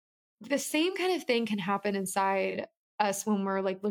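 At 0.86 s the speech shows digital radio blending to analogue: the receiver lost its digital stream and cross-faded over about 136 ms to the FM broadcast. Faint hiss sits around 40 dB down, and level holds steady until the return at 2.59 s.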